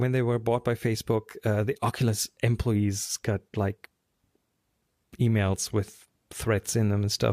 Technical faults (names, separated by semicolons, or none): none